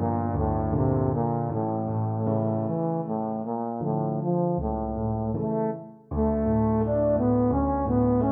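No technical faults are audible anywhere in this audio.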